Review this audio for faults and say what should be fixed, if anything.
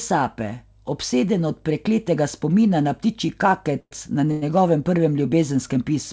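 Two brief call audio freezes break the speech, at 3.80–3.93 s and 4.31–4.44 s. In each, the sound stalls into a fading buzz, the first for about 113 ms, trailing into roughly 50 ms of silence, and the second for about 105 ms without going silent. The speech then resumes where it stopped with nothing lost, only pushed later. The likely cause is held-up packets draining the jitter buffer. The G.722 path, capped at 8 kHz, carries the stretch around them. To prevent it, give the jitter buffer more headroom and reduce network delay spikes.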